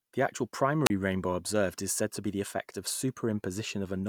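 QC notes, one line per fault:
0.85–0.90 s, wireless microphone squelch dropout: the radio link from the transmitter fades for a moment, so the receiver's squelch kicks in and mutes its output. You get a quick puff of hiss as the carrier weakens, then a hole of near silence lasting about 32 ms before the signal comes back strong enough for the squelch to open again. The speech picks up with "rainbow observed is said".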